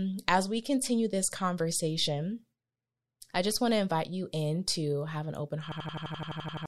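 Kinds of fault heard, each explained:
System hang loop: the system froze while the sound hardware kept replaying one buffer. From 5.72 to 6.66 s, an 85.33 ms slice repeats 11 times. It sounds like a machine-gun stutter at 11.7 Hz. This fits a 4096-sample buffer. About a second is lost.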